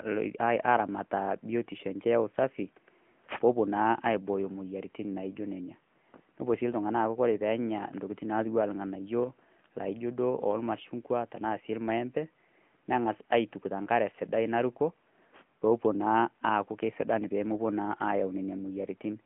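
From start to finish the speech has the sound of the AMR narrowband mobile codec, the old 2G/3G phone coder. Nothing reaches past about 3.7 kHz, and the band sits roughly between 150 Hz and 3.4 kHz, so it's thin and boxy. The codec rebuilds the voice from a vocal-tract model fed by sparse pulses, and at this bitrate the damage is plainly audible: a buzzy, synthetic edge that fits a mid-rate mode around 10.2 kbps.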